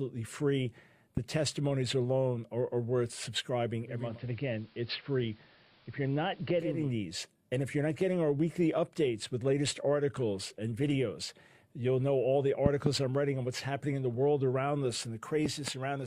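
At 1.17 to 1.20 s a single loud pop sits on top of the sound, peaking roughly 10 dB above it, while the audio runs on unbroken beneath. A sudden voltage step, likely from a plug, switch or static discharge, was shaped by the following circuitry into a short thump. Because nothing drops out around it, it is an added pulse rather than a gap or a digital click.

From 3.79 to 6.96 s the audio shows digital radio blending to analogue. The receiver lost its digital stream and cross-faded, over about 0.43 s, to the AM broadcast of the same station, then back. In the AM stretch the level drops by about 2 dB, and a faint hiss rises, far below the sound. The gradual fades in and out, with hiss arriving alongside the level drop, set it apart from a simple low-pass filter or a codec switching bitrate.

At 12.66 to 12.89 s two pops follow in quick succession, the stronger peaking roughly 20 dB above the sound, and at 15.46 to 15.70 s another pair comes in at roughly 15 dB. 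Each pair likely comes from a make-and-break contact, with the audio continuing through both pulses.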